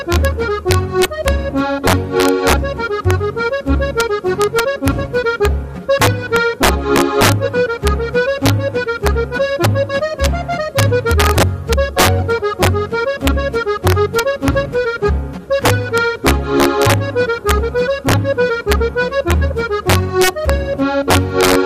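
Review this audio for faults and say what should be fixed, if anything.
Integer overflow runs through the whole clip. The signal was driven about 7 dB past the integer limit. Roughly half a percent of samples went over. The sum was not limited, so each of those samples wrapped to the opposite sign. The waveform jumps across the full range at those points. This is heard as cracks on the loudest peaks, sharper than ordinary clipping. To prevent it, use saturating arithmetic or headroom before the gain stage.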